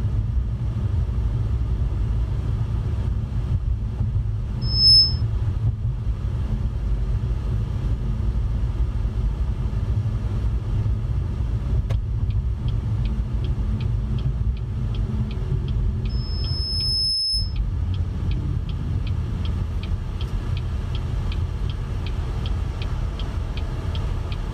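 Loudspeaker feedback squeal appears twice in this audio, from 4.61 to 5.22 s and again from 16.09 to 17.56 s, both times as a single tone at 5.2 kHz. A microphone is hearing the loudspeaker it drives, and at that frequency the loop gain climbs past one, so the tone feeds on itself. The first squeal swells fast, in roughly a third of a second, to about 10 dB over the program. The second builds slowly over about a second and levels off near the program's own loudness.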